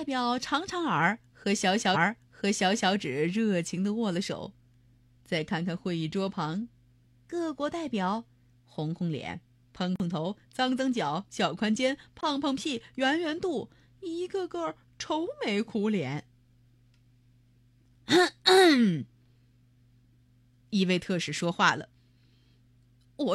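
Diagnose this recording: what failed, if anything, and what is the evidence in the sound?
The playback stage repeated a stream segment. Between 1.91 and 2.88 s, just under a second of the speech plays a second time, adding about 975 ms to the clip, and a small blip marks the jump back. The player fetched or queued the same segment twice. A stutter or loop artefact would repeat a tiny fragment many times; this is one clean, second-long replay of continuous programme, which points to segment handling in the stream.

In the driver or buffer stage, two blocks of digital silence appear, at 9.96 to 10.00 s (about 43 ms) and 12.21 to 12.23 s (about 21 ms). The sound cuts out and back with no fade, so the gaps register as short holes. The output buffer likely wasn't filled in time. The lengths fit 2048- and 1024-sample blocks. Network packet loss would usually be concealed or smeared, not dropped to zeros with hard edges.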